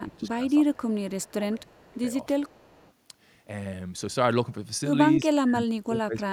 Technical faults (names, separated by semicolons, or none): speech suppressed in double talk; echo leak